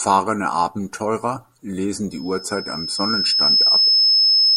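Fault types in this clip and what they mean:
Loudspeaker feedback squeal: the microphone is hearing its own loudspeaker, and at 5.2 kHz the loop gain passes one, so that tone keeps growing. From 2.10 s it swells over about one and a half seconds to roughly 10 dB above the speech and runs to the end. A steady interference whine would instead sit at a fixed level.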